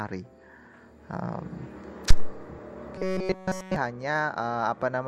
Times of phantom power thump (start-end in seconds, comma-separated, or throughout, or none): 2.10-2.36